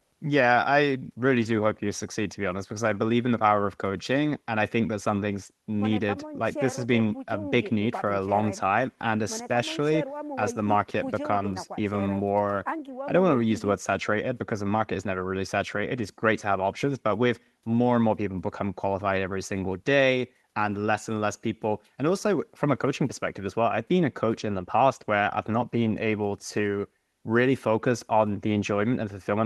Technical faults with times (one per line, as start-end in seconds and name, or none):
none